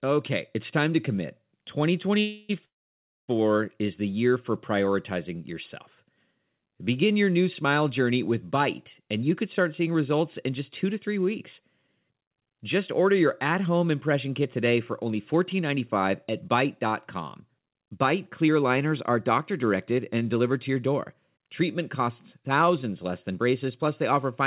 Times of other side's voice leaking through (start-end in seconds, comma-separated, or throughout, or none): none